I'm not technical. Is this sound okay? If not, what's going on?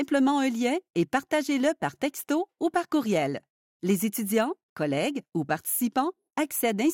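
Yes, nothing here points to a technical fault, so the sound is fine as it stands.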